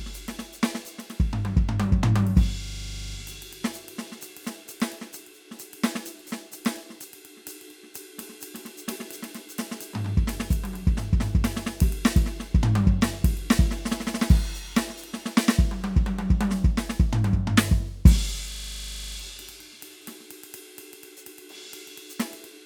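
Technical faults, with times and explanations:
2.64–3.16 s and 18.52–19.16 s, system hang loop: The music freezes into a rapid rattling stutter twice. A single 40 ms slice repeats exactly, 13 times in the first event and 16 in the second. The driver or system stalled while the sound hardware kept replaying the same ring buffer, which points to a buffer about 40 ms long. Repeating at 25 Hz, the slice sounds like a coarse buzz. Playback then resumes with little or no audio missing.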